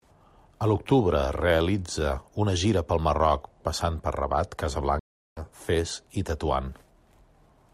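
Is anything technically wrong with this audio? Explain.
Yes. From 4.99 to 5.41 s the speech drops out into about 0.37 s of silence, then picks up roughly a fifth of a second further along, so a short stretch of talk is skipped rather than just paused, and it comes back gently at first instead of at full level. This is a stream reconnect: the connection broke, the player went quiet, re-established the link and started a new decoder partway through the stream, fading in its first output.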